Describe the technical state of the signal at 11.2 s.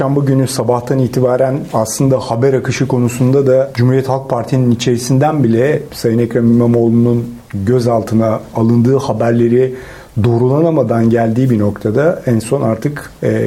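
The signal at 11.2 s is intact, with no audible fault at that moment.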